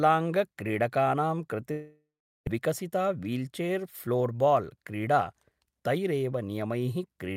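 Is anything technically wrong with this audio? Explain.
Yes, there are two faults, one right after the other.

From 1.71 to 2.48 s the speech stops and the last sound carries on as a fading buzz, then goes to near silence for a few tenths of a second before speech resumes with half a second simply gone. This is likely a long network dropout: no packets arrived, so the receiver stretched the final fragment to cover the gap, let it decay, and then continued past the lost audio.

From 2.58 to 5.34 s the speech sounds hurried, running at about 109% of normal speed while its pitch stays the same. This is a jitter buffer speed-up. After the dropout, delayed audio arrived in a burst and the buffer held more than it needed. To remove roughly a third of a second of extra delay, the receiver repeatedly cut out tiny pitch-period-length slices, which compresses the timing without changing the pitch.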